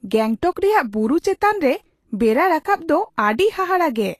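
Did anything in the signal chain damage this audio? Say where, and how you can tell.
Yes. The codec stage is the problem, likely Vorbis compression. Throughout the speech the treble sounds hissy and grainy, and consonant attacks blur. Nothing survives above 14.2 kHz. Fine high-frequency detail has been quantised into noise, which fits a low bitrate near 35 kbps.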